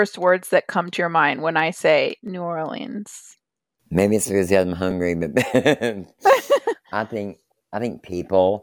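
At 2.28 s, after "mind when I say", and at 4.91 s, after "it's because I'm", a repeated buffer replays a 5 ms slice once, then twice. Because a piece is repeated rather than missing, each event is a brief click-buzz, not a silent gap.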